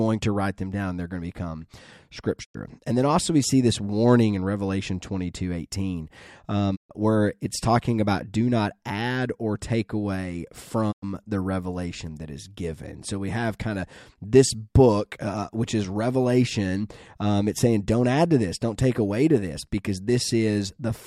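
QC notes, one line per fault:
2.43–11.04 s, digital broadcast dropout: the speech quickly fades to silence three times, at 2.43–2.56 s, at 6.75–6.92 s just before "where it's talking about", and at 10.91–11.04 s between "add or take away" and "the revelation that is". The receiver muted after losing the signal or rejecting corrupt frames, with a 20 ms fade into each hole. It lost 96, 128 and 96 ms, which fits whole blocks of about 32 ms, and nothing sent during those gaps can be recovered.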